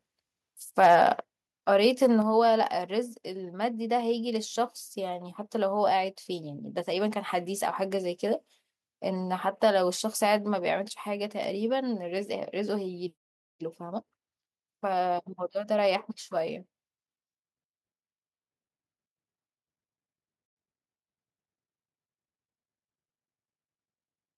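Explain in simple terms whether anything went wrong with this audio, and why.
From 0.79 to 1.03 s the loudest speech sounds harsh and crackly. This is microphone overload, likely because the input was set so high that its peaks were chopped off. Unlike a dropout, the sound stays continuous.

At 1.2 s and again at 2.2 s, voice and background both drop suddenly. This is the microphone volume being stepped down, likely the call software reacting to that overload. It is a sudden step rather than a gradual fade.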